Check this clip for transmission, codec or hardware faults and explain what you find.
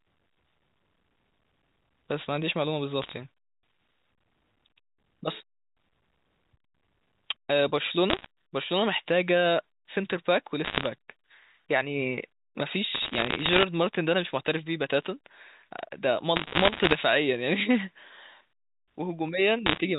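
The speech has one transmission fault: bit errors on a digital phone line, in bursts at 3.02–3.13 s, 8.10–8.26 s, 10.65–10.86 s, 12.95–13.63 s, 16.36–16.95 s and 19.66–19.78 s. The A-law telephone coding's 4 kHz band limit is audible throughout. Between roughly 0.7 and 1.5 bits in a hundred flip in the bursts, and every flipped sign or high-order bit corrupts a single sample. The result is sharp ticks that merge into crackle over the otherwise intact speech.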